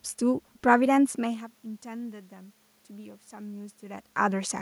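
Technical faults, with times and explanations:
No technical faults are present, so there are no times or explanations to give.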